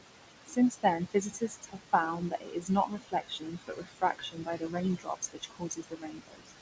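Noise suppressor artifacts run through the whole clip. The room noise, sitting only about 8 dB below the speech, is pulled down by about 19 dB between phrases and surges back under them. The band limit at 8 kHz fits a G.722 call codec.

Speech cut by the noise suppressor occurs at 0.46 to 1.93 s, 2.14 to 2.7 s, 2.86 to 4.76 s and 4.98 to 6.51 s. The suppressor mistakes quieter speech for noise and turns it down by about 16 to 21 dB, so endings and soft stretches sound swallowed, most heavily between 4.98 and 6.51 s.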